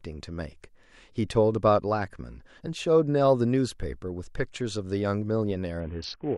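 A Bluetooth SBC bit pool drop hits the last half-second of this speech clip, from 5.80 s to the end at 6.37 s. The encoder's bit allocation collapses, consistent with a fall from a normal bit pool of around 31 to a starved one near 5, roughly 50 kbps. The upper sub-bands lose their bits, so the treble goes dull, and the remaining bands are coarsely quantised, leaving a gritty noise over the sound.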